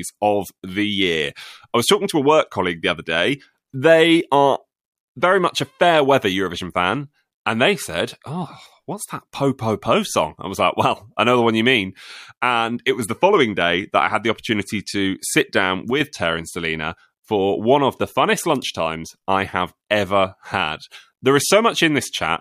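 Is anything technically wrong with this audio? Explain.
Yes, there's one glitch worth flagging. Just after "opportunity to sit down", from about 15.91 to 16.01 s, the speech briefly dips, dropping by about 6 dB for a tenth of a second before snapping back. That's likely one channel dropping out: if one side of a stereo pair goes silent, the mono sum loses half of what both sides share, hence the sudden, short level hole rather than a fade.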